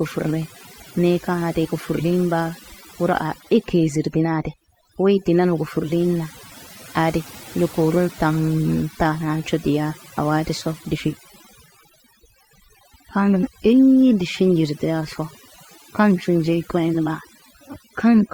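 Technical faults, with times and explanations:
Throughout: overdone noise removal. Noise reduction was pushed too hard on this speech. Frequency bands close to the estimated noise floor are cut away, along with quiet parts of the voice. The background drops and breaks up into twinkling specks.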